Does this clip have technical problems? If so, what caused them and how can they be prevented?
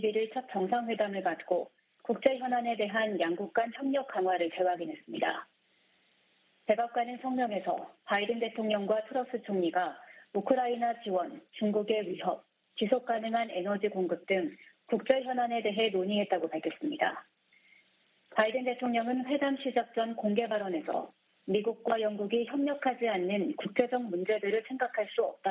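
No, no technical faults are audible.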